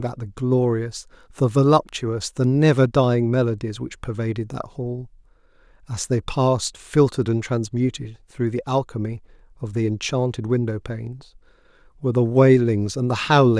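Nothing technically wrong can be heard anywhere in this speech recording.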